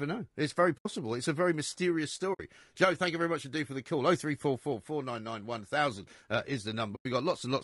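Speech with a rough, grainy texture throughout, noise filling the gaps between harmonics and a synthetic-sounding top band, likely low-delay AAC compression (AAC-ELD) at around 32 kbps. AAC frame loss with muting leaves soft-faded holes at 0.77–0.86 s, 2.33–2.40 s and 6.95–7.06 s, lasting roughly 80, 60 and 100 ms, where the decoder zeroed the lost frames.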